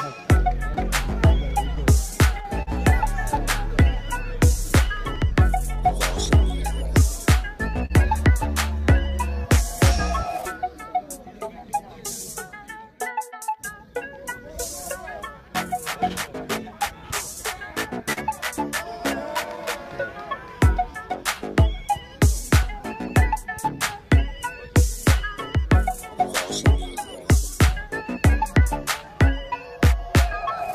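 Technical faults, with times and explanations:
Throughout: clock drift between sender and receiver. The sender's clock runs about 4% slower than the receiver's, so the jitter buffer keeps draining and must be topped up. The sound carries small, unevenly spaced timing hiccups from start to finish.
0.10–30.68 s: repeated timing corrections. To keep step with the slow sender, the receiver repeatedly stretches short pieces of audio, adding roughly 0.7 s in all and playing at about 97% speed. The tempo feels slightly dragged and unsteady.
0.74–2.69 s, 4.97–7.92 s, 9.85–10.43 s, 12.57–20.09 s, 22.63–27.92 s: scattered short gaps. Packets were lost or late, a handful in each stretch, and the receiver bridged each hole by continuing the last sound. The longest patch is around 50 ms, heard as brief ticks or smears.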